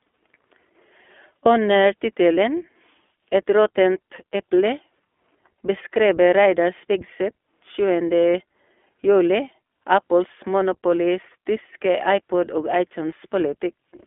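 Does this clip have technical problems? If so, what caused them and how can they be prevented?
Yes. The audio passed through an iLBC codec coding each 20 ms frame independently, fitting its 15.2 kbps mode. It leaves a 250 Hz to 3.4 kHz band and plainly audible rough, synthetic speech throughout. Prevent this by using a wideband codec, such as Opus, end to end.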